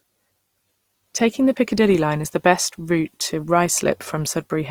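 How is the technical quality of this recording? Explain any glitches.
The technical quality is limited by one fault that runs through the whole recording.

Opus compression, throughout: the speech has a rough, grainy texture, with its tones turning noisy instead of clean. The likely cause is lossy coding in Opus's music mode at a low rate, which fits about 24 kbps. The encoder keeps each band's energy but, short of bits, fills band detail with folded or noise content. Bandwidth stays wide, reaching up to 20.4 kHz, so the damage is harshness rather than muffling.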